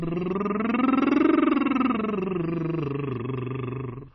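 It's a short music clip that sounds watery and swirly all the way through, with nothing above about 5.8 kHz, which points to heavy MP3 compression, likely at a very low bitrate like 24 kbps.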